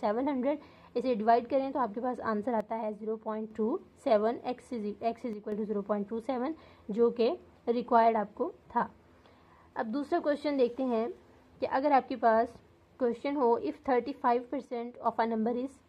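One stereo channel likely drops out three times, from 2.60 to 3.51 s, 5.33 to 5.52 s and 14.65 to 15.06 s. In the mono sum, the shared sound falls abruptly by about 6 dB, and anything carried only by that channel vanishes until it returns.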